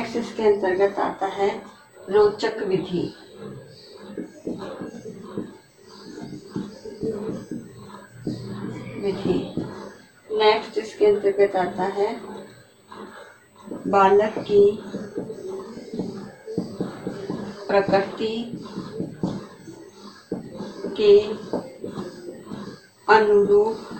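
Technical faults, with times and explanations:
Throughout, USB whine: a steady, fixed-pitch tone sits at 8 kHz for the whole clip, roughly 40 dB below the main signal, so it reads as a thin, high hiss-like whistle that never changes pitch. A tone at exactly 8 kHz points to the USB bus's 125-microsecond microframes. The current drawn at that rate leaks into the audio path through the shared power or ground, and that periodic draw becomes an audible tone.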